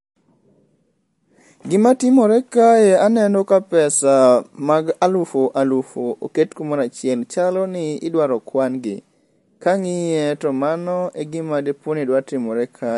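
MP3 compression runs throughout this speech clip, and the damage is plainly audible: nothing remains above 11.3 kHz, and the sound has a watery, swirly texture with chirpy sibilants. That is likely an MP3 encoder starved of bits, consistent with roughly 48 kbps, cutting the treble and switching weak frequency lines on and off between frames.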